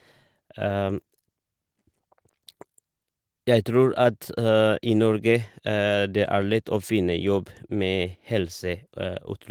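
No technical faults are audible.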